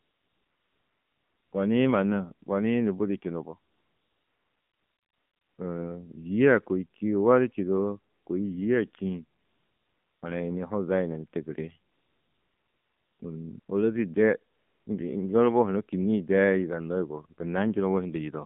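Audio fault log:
Throughout: AMR narrowband mobile codec. The speech has been squeezed through AMR-NB at 7.4 kbps, so it's band-limited to roughly 150 Hz to 3.6 kHz and the low bitrate leaves a plainly audible buzzy, synthetic edge, since the vocal-tract model only gets a handful of pulses per subframe.
0.00–1.52 s, 3.72–5.58 s, 8.14–8.26 s, 9.40–10.22 s, 11.92–13.20 s, 13.60–13.68 s, 14.54–14.86 s: AMR comfort noise. In each of these gaps the phone stopped sending speech frames, for anywhere from 80 ms up to 1.86 s, and the far end filled in smooth, steady synthetic hiss, so the background switches in and out rather than flowing naturally.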